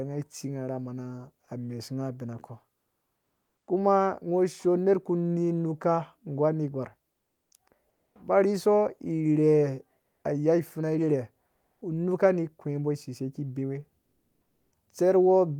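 Comfort noise in place of the background appears in this speech recording at 7.89–8.15 s, 10.01–10.23 s, 11.47–11.81 s and 14.01–14.71 s. In each pause the faint background, about 50 to 58 dB below the loudest speech, turns into a steady, featureless hiss. It sits about 2 dB lower, about 4 dB higher, about 1 dB lower and unchanged in level respectively. The likely cause is Opus discontinuous transmission, with the receiver synthesising noise while the sender was silent.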